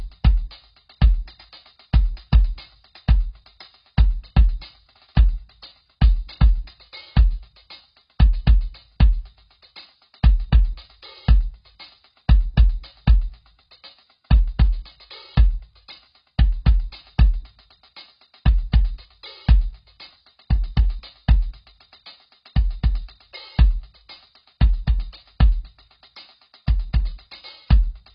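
A music clip, heavily damaged throughout by what is likely AAC compression: nothing survives above 5.4 kHz, and sustained tones warble with a fizzy, smeared texture. That churning sets it apart from plain low-pass filtering, and the depth of damage fits a bitrate near 16 kbps.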